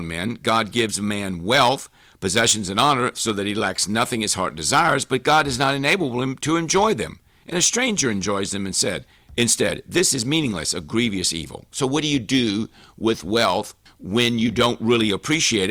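Harsh crackle breaks out on the loudest peaks of the speech for the whole clip. This is hard clipping: the signal is driven about 8 dB past what the stage can pass, so a small fraction of samples have their peaks sliced flat, adding high harmonics.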